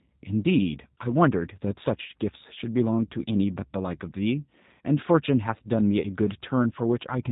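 Speech runs through the G.729 codec for its whole length, which fits an 8 kbit/s stream. Nothing survives above about 3.8 kHz, and the rebuilt voice sounds plainly rough and synthetic. That buzzy, parametric texture, not just a dull narrow band, separates it from simple telephone band-limiting.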